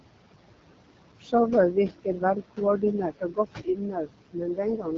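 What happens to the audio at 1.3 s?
At 1.3 s the sound falls inside a brief stretch of speech cut by the noise suppressor, running from 1.2 to 1.33 s. The suppressor mistook part of the speech for background noise and turned it down with the room noise, by about 16 dB at the deepest point, over roughly a tenth of a second. The passage sounds swallowed and faint. On a waveform the envelope sags into a short dip, and on a spectrogram the speech energy thins to a pale notch in that window.

The same moment carries the noise suppressor artifacts present throughout. The suppressor lowers whatever it judges to be steady noise, here by about 21 dB, so the room noise, which sits about 10 dB below the speech, drops away in gaps and swells back beneath the speech. A spectrogram shows the noise floor pumping frame by frame.

Underneath both sits the AMR wideband (HD Voice) codec, with plainly audible damage. 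It has the rough, raspy grain of a low-rate mode, which fits the 8.85 kbit/s setting. The codec models speech only up to 6.4 kHz and fills the band above that with shaped noise. On a spectrogram there is a hard ceiling at 7.5 kHz.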